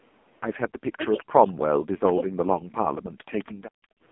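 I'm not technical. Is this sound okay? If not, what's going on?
No. Four separate problems can be heard.

The whole clip has passed through the AMR narrowband mobile codec, the speech compression used on older 2G and 3G mobile calls. It keeps nothing above 3.4 kHz, so the voice sounds muffled and phone-like. Here the compression is squeezed hard, and it rebuilds the voice from a rough model rather than the real sound. That leaves it buzzy and synthetic throughout the 4 seconds.

There is an echo leak at 0.61 to 0.68 s, 0.92 to 1.24 s, 1.49 to 1.53 s and 3.39 to 3.52 s. In each, a faint copy of speech comes back about 0.21 s late. The likely cause is a loudspeaker at one end of the call. Its sound reached the microphone there, and the echo canceller failed to remove all of it before sending it back down the line.

Speech suppressed in double talk shows up from 0.68 to 1.13 s and again from 1.31 to 3.24 s. 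During these stretches the voice dips sharply, at times almost to nothing, and comes back in pieces. This is likely because both sides were talking at once. The echo canceller could not tell the real talker from the returning echo, so it turned everything down.

Background gated by the echo canceller follows from 3.52 to 4.02 s, right after the last echo. The room sound behind the voice drops away almost completely for a moment. The canceller clamped the microphone hard while the loudspeaker was playing, then let go, and the background returned near the end.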